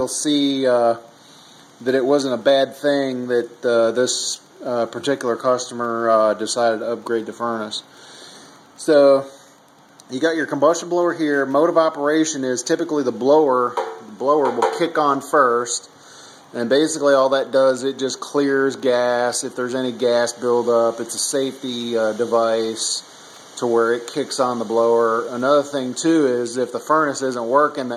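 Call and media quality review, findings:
Wi-Fi interference throughout: faint steady ticking roughly 50 dB below signal, repeating every 102.4 ms. Nearby Wi-Fi radio beacon rectified by the audio circuit; check shielding and device placement.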